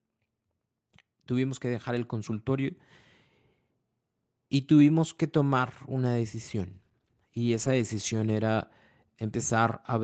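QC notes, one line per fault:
1.61 to 2.86 s, automatic gain rising: the speech and the room background swell together by about 4 dB over roughly 1.25 s, as the gain control judges the input too quiet and gradually turns it up. Because the gain acts on the whole signal, the noise floor lifts along with the speech. On a waveform the envelope widens steadily across this span, and a spectrogram brightens evenly across all bands, including the quiet gaps between phrases.
6.75 to 8.41 s, call bitrate drop: the Opus encoder falls from 32 kbps to 17 kbps and stays at the lower rate for about 1.6 s. With fewer bits, each frame is coded more coarsely, so the speech turns rough and watery until the rate recovers. The waveform's overall level barely changes. On a spectrogram, the harmonics look smeared and blotchy, and fine detail in the upper band, below the call path's normal 8 kHz ceiling, breaks into grainy patches.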